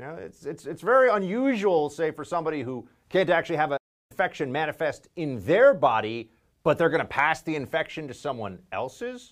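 At 3.77 s, right after "who can't actually have", the speech cuts out mid-flow and the output goes completely silent for about a third of a second, 330 ms, before resuming at 4.12 s with "manifest in their body". This is a playback stall: the player likely ran dry of buffered data or had its audio thread blocked. It then picked up again once data or processing time became available.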